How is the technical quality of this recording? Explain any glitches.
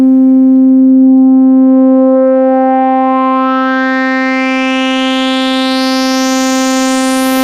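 Gain pumping runs through the whole recording, from start to finish. The likely cause is input gain set far too high, with a fast limiter or compressor clamping down on every loud moment and releasing in the gaps, swinging the level by around 15 dB. Loud and quiet passages sit unnaturally close in level, leaving the audio squashed.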